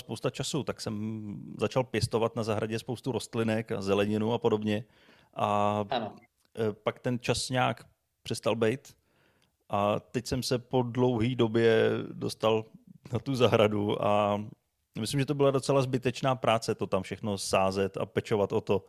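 No audible technical faults turn up anywhere in this recording.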